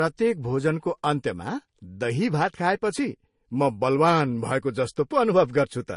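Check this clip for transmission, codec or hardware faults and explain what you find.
Transcoding between lossy codecs runs through the whole clip. The speech has nothing above about 10.6 kHz, and two layers of coding damage sit on top of each other. The likely cause is a low-rate MP3 encode, near 42 kbit/s, re-encoded as Vorbis at a similar rate. The second codec spends its scarce bits reproducing the first codec's artefacts, then adds its own artefacts, while keeping the earlier band limit.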